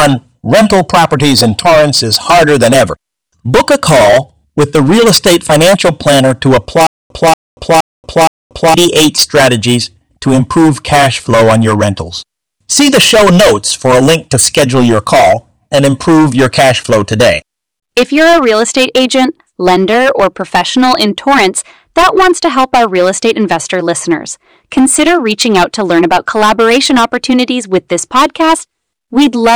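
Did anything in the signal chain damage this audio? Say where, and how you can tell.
Yes, at the playback stage. From 6.87 to 8.74 s, right before "strategies to improve cash", there's a stutter with silent gaps: a 234 ms burst of speech repeats four times, each followed by 235 ms of digital silence. The likely cause is a stalled stream replaying its last fragment, so the speech in that span is lost.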